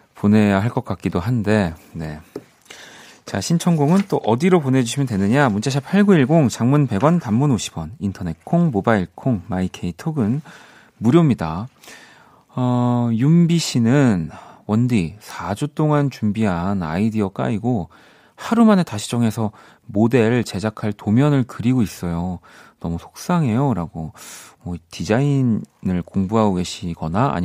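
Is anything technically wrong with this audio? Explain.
No, the recording carries no audible technical faults, and the signal path holds steady for the whole clip.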